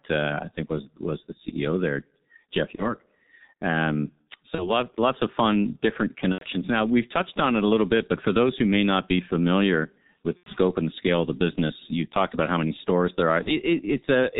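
From the start the whole thing is coded with G.723.1 at about 6.3 kbit/s, and it's heavily damaged: nothing comes through above 4 kHz, so the speech is muffled and hoarse, and the consonants smear because the codec's voice model updates only every 30 ms.

On top of that there's VoIP packet loss concealed by the speech codec at 2.75, 4.55 (just before "of fun different"), 6.32, 10.37 (between "not be familiar with" and "and the scale of") and 13.43 s (after "how many stores there"). The decoder fills each gap by repeating its last pitch and filter at falling gain, so you hear a brief buzzy or noisy smear that dies away. The gaps at 6.32 and 10.37 s fit about 90 ms lost; the others fit a single 30 ms frame.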